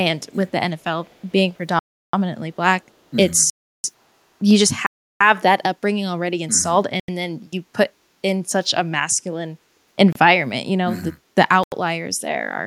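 A faint delayed copy of the speech, likely an echo leak where a loudspeaker's echo canceller on the far side let part of the returned signal through, trails behind the speech at 0.79 to 0.84 s, 1.03 to 1.32 s and 1.54 to 1.58 s. The copy lags by 439 ms in the first scrap and 468 ms in the other two. It sits very low, roughly 35 to 40 dB under the speech, so it comes through as a ghostly shadow. The longest stretch is at 1.03 s.

Blocks of digital silence then begin. The audio output was not refilled in time, so whole buffers went out as zeros. At 1.79 to 2.13 s, 3.50 to 3.84 s and 4.86 to 5.21 s, each hole lasts 341 ms, which fits a 16384-sample buffer. A shorter 85 ms hole at 7.00 to 7.08 s fits a 4096-sample block. The sound drops to dead silence with no fade.

From 9.59 to 9.96 s, the background is gated by the echo canceller. It clamped the microphone down while it judged the loudspeaker active. 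For roughly 300 ms the room sound sinks, by about 13 dB at its deepest, and then comes back up when the canceller releases.

Two more blocks of digital silence follow. A 29 ms hole at 10.13 to 10.16 s sounds like a brief break. An 85 ms block at 11.63 to 11.72 s, again pointing to a 4096-sample buffer, sounds like a clipped-off hole.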